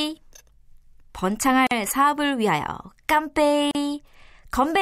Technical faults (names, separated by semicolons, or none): gap at a join of encoded pieces